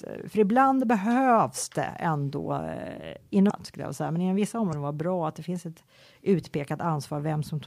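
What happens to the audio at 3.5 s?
A brief glitch, heard as a chirp, squawk, click or short gap, cuts into the speech from 3.46 to 3.51 s, just before "skulle jag säga men". It comes from damaged data in the compressed stream: the decoder misreads corrupted frames there, loses sync and hunts for the next valid frame header.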